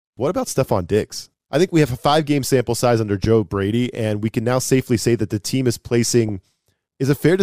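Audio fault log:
3.24 to 3.27 s, loud pop: A single sharp pop lasting about 25 ms, peaking roughly 10 dB above the speech, with the speech carrying on underneath without a break. The pop is brief and hard-edged, not a tone. That points to a sudden voltage step or pulse added to the signal, likely from a plug, a switch, a static discharge or a driver glitch. The circuits after it smooth that pulse into a single short burst.
6.29 s, DAB burbling: A very short burbling blip lands on top of the speech and is gone almost at once. It is the sound of weak DAB reception. A small share of bit errors slipped past the error correction into the MP2 audio data. The damaged samples put short blips of noise into single frequency sub-bands, which the ear hears as a momentary burble.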